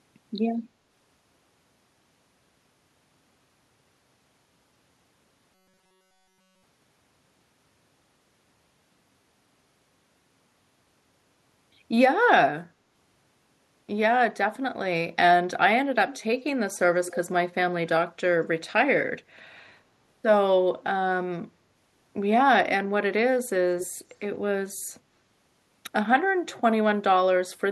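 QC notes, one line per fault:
5.54–6.63 s, robotic sound from repeated short buffers: the speech turns into a rigid metallic buzz at 188 Hz that still roughly tracks the syllables. The likely cause is starved playback: with new audio arriving too seldom, a tiny stretch of about 5.3 ms is looped over and over, so essentially all of this span is repetition and the real audio is skipped. On a spectrogram, evenly spaced horizontal harmonics of 188 Hz replace the natural pitch harmonics. The waveform shows an identical short cycle tiling the span.
16.07–16.24 s, 17.07–17.17 s, 23.80–23.87 s, 26.54–26.61 s, echo leak: brief, delayed copies of the speech trail it by about 222 to 230 ms, at roughly 15 to 30 dB below it, quietest at 26.54 s. This is likely a far-end loudspeaker whose echo canceller let part of the pickup through. The spectrogram shows faint duplicated speech patterns offset about 0.22 s in time. 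The waveform shows small low-level bursts after the louder speech.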